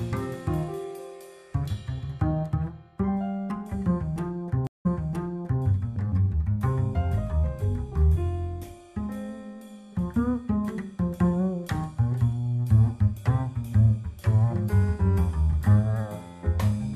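At 4.67 s a stream reconnect occurs: the connection dropped, the player stopped, then reconnected and started a new decoder partway through the stream. It sounds like a gap of about 180 ms of silence, after which the audio resumes about 0.79 s earlier than where it cut off, as the server resent a burst of recent material, so a short stretch is heard twice. The first restored frame fades in, and the disturbance ends by 5.64 s.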